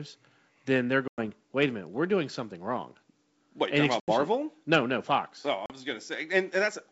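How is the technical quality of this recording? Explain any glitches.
The speech has three dropouts from packet loss on an ADPCM call, carried over G.722 wideband coding, which sounds consistent with its full 64 kbit/s mode. Gaps at 1.08–1.20 s (about 100 ms lost), 4.00–4.13 s (80 ms) and 5.66–5.75 s (40 ms) cut abruptly to silence. The decoder's predictor and step size then lag the sender's, so the speech resumes with brief distortion.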